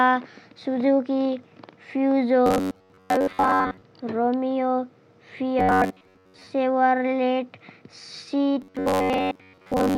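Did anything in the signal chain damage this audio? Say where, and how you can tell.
Yes. Robotic sound from repeated short buffers at 2.46–3.82, 5.59–6.48 and 8.62–9.97 s: a fixed 93.8 Hz buzz, likely a starved buffer looping about 10.7 ms, not silent dropout gaps.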